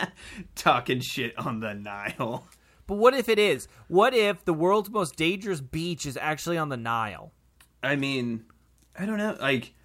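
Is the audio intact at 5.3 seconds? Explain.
Yes, the speech at 5.3 seconds is intact, with no audible dropout, click, distortion or other fault at that moment.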